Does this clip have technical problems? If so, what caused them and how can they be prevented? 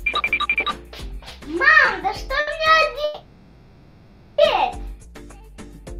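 Yes. Two short stalls from a late packet occur, at 1.85 to 1.89 s and 2.40 to 2.49 s. Each time the jitter buffer ran empty, and the receiver stretched the last sound for 20 ms and then 70 ms before continuing from the same point, losing nothing. A larger or adaptive jitter buffer would absorb this.

A call audio freeze runs from 3.04 to 4.40 s. The sound is held as a fading buzz or hiss for 1.34 s without dropping to silence, then resumes where it stopped, so no audio is missing and playback runs 1.34 s later. The likely cause is packets held up in transit. Prioritising the call traffic with network QoS would prevent it.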